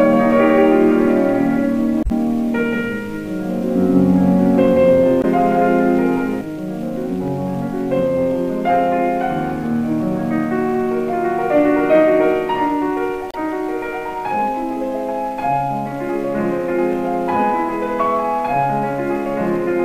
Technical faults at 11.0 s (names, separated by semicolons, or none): none